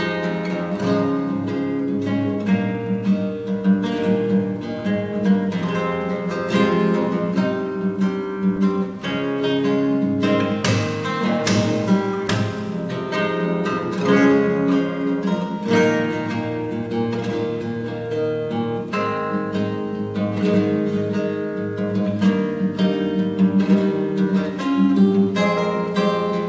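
No faults found; the audio carries through a wideband call path with nothing above 8 kHz, consistent with G.722 at 64 kbps, and its ordinary coding noise.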